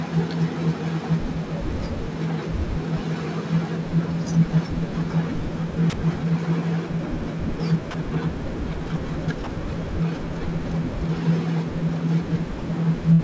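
Sound dropped by the voice detector, at 5.90 to 5.93 s, 7.91 to 7.94 s, 9.44 to 9.47 s and 12.59 to 12.62 s: in each of these four places the speech gives way to a short patch of steady, featureless noise about 30 ms long and then returns. The likely cause is a sender-side voice detector judging a quiet stretch of speech as background, stopping transmission and leaving the receiver to fill the gap with comfort noise.

Burst of packet loss, from 13.13 s to 13.22 s: about 60 ms of speech goes missing near the end of the clip. The receiver stretches the last sound it had, so the gap comes out as a held buzz or a fading hiss, and the speech then picks up further along with that stretch skipped. This concealment sits inside a call-codec band that stops at 8 kHz, consistent with G.722.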